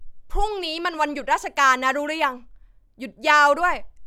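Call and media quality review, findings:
No audible faults found in the speech recording; no component in the capture or transmission path flagged for action.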